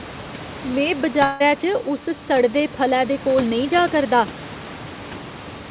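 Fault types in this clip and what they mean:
long network dropout: from 1.24 to 1.42 s a fading buzz replaces sound, not silence, likely lost packets; speech resumes with that stretch gone.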